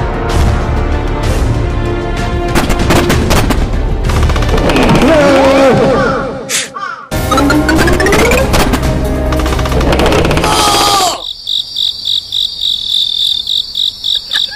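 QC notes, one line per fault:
Throughout, hard clipping: the level runs about 9 dB past what the chain can pass, so peaks get sliced flat on roughly 7% of samples. Those squared-off tops throw harmonics way up top, so every loud moment carries a harsh, gritty fuzz.
0.14 to 14.53 s, clock slip clicks: a fast, even rattle of tiny ticks, one roughly every 40 ms, a few hundred in all, each a single sample dropped or doubled. That steady rate likely comes from two unsynced clocks drifting apart by something like 500 ppm.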